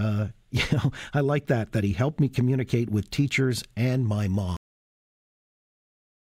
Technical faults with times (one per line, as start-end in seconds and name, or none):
4.57-6.31 cut-off end